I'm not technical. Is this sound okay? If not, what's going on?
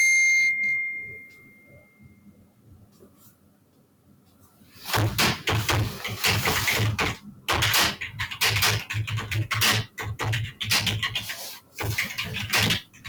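No, it has two problems running the whole way through, and one visible symptom of the second.

Hard clipping: the sound is pushed far louder than the system can carry, so the loud parts get chopped flat and come out as a constant harsh fuzz.

Noise suppressor applied to music or sounds: a filter built for voices was left on, so it keeps treating steady sound as noise, making the level pump up and down.

Sound cut by the noise suppressor: this happens from about 1.0 to 4.8 seconds, then briefly around 7.2, 11.6 and 12.8 seconds, where sustained sound sinks or fades out early.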